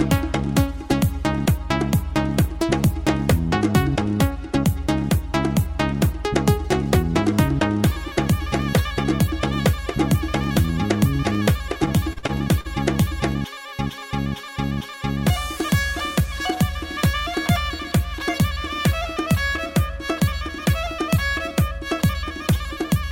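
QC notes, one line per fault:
11.69–12.67 s, repeated stalls (stutter): the buffer ran dry six times, the longest gap 43 ms. Each gap was filled by continuing the last sound, so it drags and stutters.
16.20–16.74 s, jitter buffer speed-up: about 50 ms of short pitch-period pieces were cut to shrink a backlog. The sound runs at 108% speed, same pitch, hurried.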